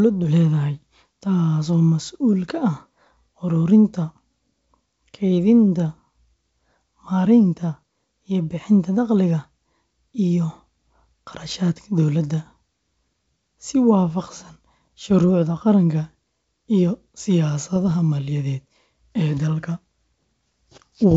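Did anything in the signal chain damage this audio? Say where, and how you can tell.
Yes: bit errors on the ADPCM link between 17.76 and 17.94 s throw off the decoder's step size and predictor, producing pops and a rough burst with level jumps.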